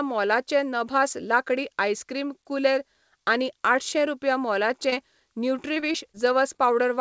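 At 4.90 to 4.94 s a short concealed packet loss occurs: about 20 ms of audio arrived too late for the decoder, and the receiver extended the preceding sound to cover it before crossfading back, leaving a brief smear.

From 5.74 to 6.16 s repeated packet loss (robotic sound) sets in. Four gaps, the longest 22 ms, remove about 80 ms in total, so roughly a fifth of that stretch is synthetic fill. The patches arrive close together and the sound turns choppy.

Two more short concealed packet losses follow back to back, at 6.54 to 6.57 s and 6.57 to 6.60 s, each about 20 ms missing. The audio sits below 8 kHz throughout, which fits a G.722 call codec.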